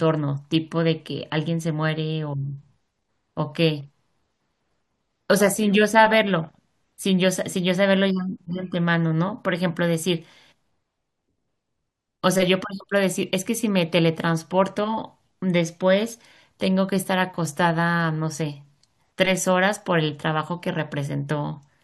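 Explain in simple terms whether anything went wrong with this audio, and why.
Nothing went wrong with this audio: there is no technical fault anywhere in it.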